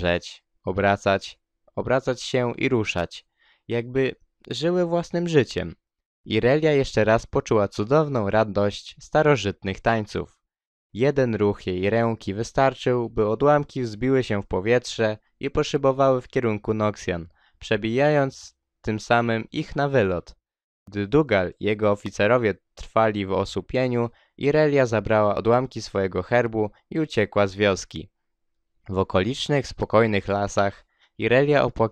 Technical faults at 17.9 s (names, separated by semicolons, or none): none